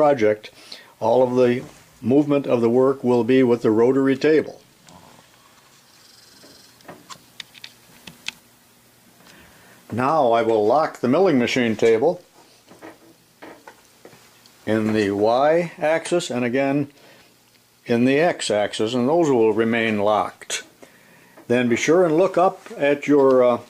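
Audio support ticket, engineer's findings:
Nothing stood out on listening, and there are no findings to log against this ticket.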